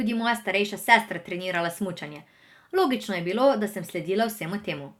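No technical faults can be heard in the speech.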